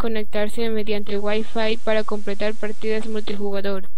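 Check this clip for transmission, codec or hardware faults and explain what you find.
Two faults are present: a DC offset across the whole clip, and a digital radio blend to analogue FM between 0.91 and 3.65 s.

DC offset runs from start to finish. A constant bias in the signal chain shifts the entire speech waveform off the zero line. You cannot hear it directly, but it eats into headroom and puts steady energy at the very bottom of the spectrum.

Digital radio blending to analogue begins at 0.91 s. The receiver loses the digital stream and cross-fades over about 446 ms to the station's FM broadcast, returning to digital by 3.65 s. During the FM stretch, the level drops by about 1 dB, and hiss rises to roughly 25 dB below the speech.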